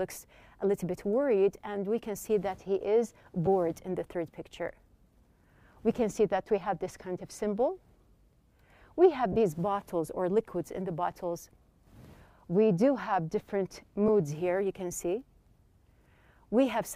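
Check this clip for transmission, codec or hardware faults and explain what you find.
There are three dropouts from lost LE Audio frames, at 3.46 s, 9.32 to 9.36 s and 14.08 s. Light lossy compression is also present, too subtle to tie to a particular codec.

Lost LE Audio frames: the short gaps, about 10 ms each, suggest single 10 ms frames. The longer 40 ms gap at 9.32 s suggests several in a row. Each time, the LC3 decoder papers over the hole by replaying the last spectrum with scrambled phase. You hear a brief noisy smear.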